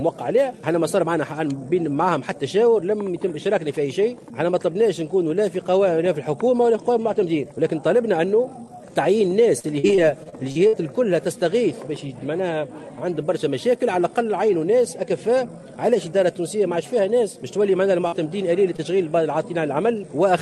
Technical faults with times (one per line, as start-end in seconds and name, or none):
9.59-10.75 repeated packet loss (robotic sound)
18.07-18.14 burst of packet loss
18.76-18.80 short concealed packet loss